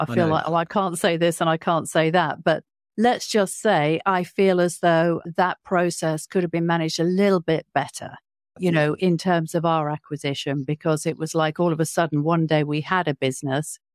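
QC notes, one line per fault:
No fault is audible anywhere in the speech on this clip.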